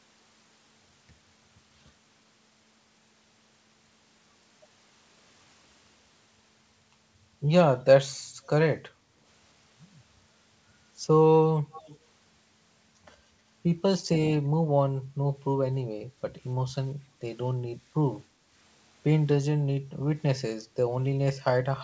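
An echo leak appears from 11.72 to 11.98 s: a faint delayed copy of the speech trails the original by about 297 ms, roughly 20 dB down. The likely cause is a far-end loudspeaker whose echo canceller let part of its microphone pickup through and sent it back.

Background gated by the echo canceller follows at 17.07 to 17.19 s. The room sound dips by about 6 dB for roughly a tenth of a second, because the canceller pulled the microphone down hard while the loudspeaker played, then released it.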